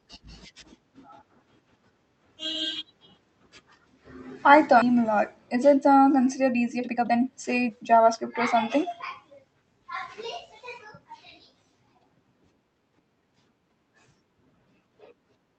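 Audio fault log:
4.81 s, skip ahead: The receiver discarded about a second of audio, either lost in transit or thrown out when the jitter buffer overflowed, while newer audio was already queued behind it. Playback therefore leaps forward with no gap and no fill, so the sound on either side is butted together almost directly and the listener lands abruptly on "a lot". The whole second of content simply never arrives.
6.40 to 8.16 s, jitter buffer speed-up: The jitter buffer was holding more audio than its target, so the receiver shortened its backlog by repeatedly cutting out short slices one or a few pitch periods long. Across this stretch, from just after "it uh" up to "or something", roughly half a second is removed and the speech plays at about 126% speed. Because whole pitch cycles are dropped, the pitch stays put, but the delivery sounds noticeably rushed.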